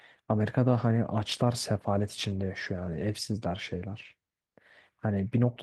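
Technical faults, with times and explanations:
No technical faults can be heard in this speech.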